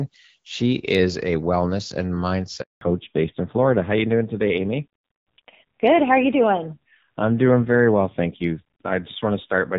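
Right after "is a wellness and", at 2.61 s, the speech drops out for 200 ms until 2.81 s. That's a handover gap: the call was passed between networks, no speech frames made it through during the switch, and whatever was said in that stretch is simply gone.

From 2.81 s to the end there's a fallback to narrowband. The earlier part sounds like HD Voice, and after the switch nothing above 4 kHz survives, so the voice turns dull and rougher. That roughness points to a low-rate narrowband codec, something around 5.9 kbit/s.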